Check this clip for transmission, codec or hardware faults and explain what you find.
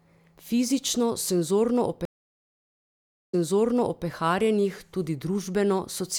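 One transmission fault is present, a stream reconnect between 2.05 and 4.06 s. The speech cuts to silence for 1.25 s, then picks up again at a point about 0.76 s earlier than where it stopped, so a short stretch is heard twice. This happens when the connection drops, the player goes quiet, reconnects and starts a new decoder partway through the stream, while the server resends a burst of audio it had already delivered.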